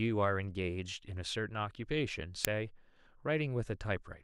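At 2.45 s an uninitialised buffer reaches the output: a block was played before any speech had been written into it, so stale memory contents were sent out as samples. It is heard as a very brief, loud crack, short enough to fit a 64-sample block.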